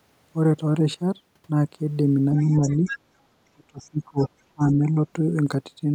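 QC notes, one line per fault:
2.36 to 2.98 s, other side's voice leaking through: a second voice sits under the speech, about 15 dB below it. The likely cause is a loudspeaker echo that the echo canceller did not fully remove.
3.79 to 3.89 s and 4.18 to 4.28 s, other side's voice leaking through: two brief scraps of the far voice appear, very faint, about 25 to 30 dB down. They are likely residual loudspeaker echo reaching the microphone.
2.43 to 2.84 s, speech suppressed in double talk: the talker dips by about 10 dB for a short stretch. This overlaps the leaked voice. The likely cause is the canceller turning everything down while both sides spoke.
3.54 to 4.2 s, speech suppressed in double talk: the speech is gated hard, dropping about 30 dB over about half a second. The likely cause is the canceller confusing the talker with echo.
4.53 to 4.62 s and 4.78 to 4.93 s, speech suppressed in double talk: there are two short dropouts. 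The first is deep, about 30 dB. The second is a slight dip. Both are likely double-talk suppression.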